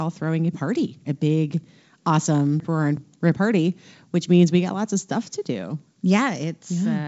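From 2.60 to 3.34 s the speech jumbles just before "party which means we", a case of chunks out of order: one 372 ms chunk plays a slot late, swapping two segments. Three hard joins show as vertical lines on a spectrogram and abrupt waveform steps, while the G.722 band limit near 7.7 kHz stays intact.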